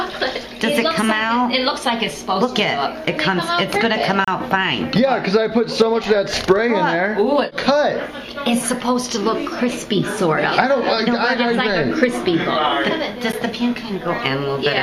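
Continuous audio briefly drops to silence for about 31 ms at 4.25 to 4.28 s and about 10 ms at 13.32 s. These are gaps at joins of separately encoded pieces, where untrimmed encoder delay and end padding remain.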